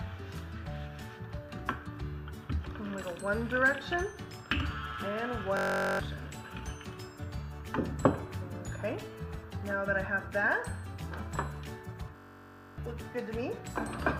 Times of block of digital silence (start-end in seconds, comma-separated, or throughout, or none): none